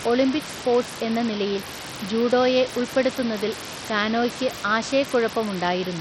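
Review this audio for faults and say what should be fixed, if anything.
The speech is gritty throughout, with flickering treble and nothing above 16.6 kHz. This is likely Bluetooth SBC compression: a rate fitting about 64 kbps leaves the top sub-bands starved of bits. To prevent it, record over a wired connection or a higher-quality Bluetooth codec.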